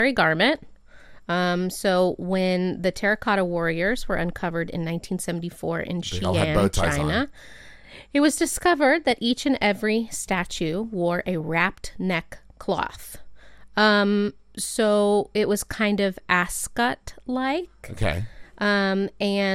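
At 9.11 s a brief DAB burbling blip appears, and from 11.23 to 11.41 s a longer burst follows. Weak reception let bit errors slip past error correction into the MP2 data, so corrupted samples put short noise blips into single sub-bands and corrupted scale factors throw sub-bands up or down in level for up to a frame. On a spectrogram, isolated rectangular blocks flash in narrow bands, and the second, denser cluster fits roughly ten damaged frames.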